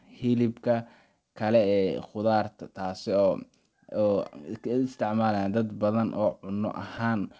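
Throughout the speech there is clock drift between sender and receiver. The sender's clock runs roughly 2% slow, so the receiver's jitter buffer keeps running short of audio. Unlike a plain sample-rate mismatch, which would shift pitch evenly, the pitch stays put here and only the timing wobbles. Unlike packet loss, nothing turns metallic, because no audio is missing. Each slip is tiny, but the offset keeps growing in one direction.

From 0.46 s to 7.22 s the receiver makes repeated timing corrections to keep in step. It stretches short pieces of audio, so playback runs at about 98% speed and adds roughly 150 ms over that stretch. The edits come at uneven intervals and, if heard at all, come across as faint hiccups or a slightly dragging, unsteady tempo. This sets them apart from jitter-buffer underruns, which leave audible gaps. The call path's 8 kHz top end, consistent with G.722, sits underneath these corrections.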